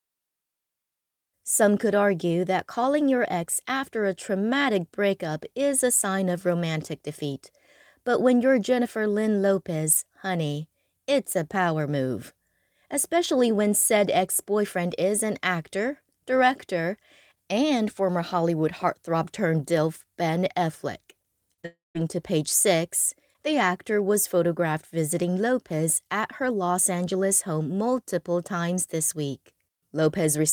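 At 21.53 to 21.60 s and again at 21.62 to 21.65 s the speech briefly smears and wobbles. This is short concealed packet loss: about 40 ms and then 20 ms of audio arrived too late, and the receiver extended the preceding sound to bridge each hole before blending back.

From 21.65 to 21.97 s the sound carries on as an artificial continuation that fades away, followed by about 170 ms of silence, before speech resumes with "to page". This is likely a long network dropout, with roughly 300 ms of audio lost and never played.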